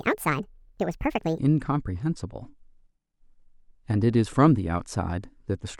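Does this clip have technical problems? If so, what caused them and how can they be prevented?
Yes. From 0.00 to 1.38 s the speech sounds hurried and high, a section at the wrong speed running 1.61 times too fast, roughly seven semitones up, likely from playback against a mismatched clock. Confirm the editor and player use the recording's sample rate before export.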